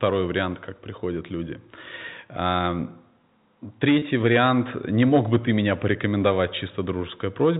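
Packet loss with pitch repetition, 3.99–4.02 s: the last pitch period is repeated across a 30 ms gap, so the sound holds with a buzzy edge.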